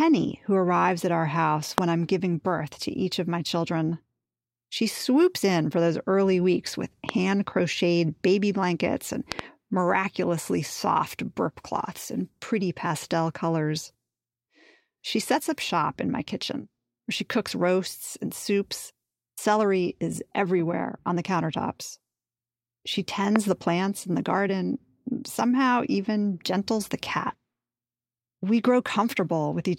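Sharp loud pops cut through the speech at 1.78–1.80 s, 7.09–7.11 s, 9.32–9.41 s (a quick double) and 23.36–23.38 s, standing roughly 15 to 20 dB above it while it continues underneath. Each is likely a voltage spike from a switch, plug or static.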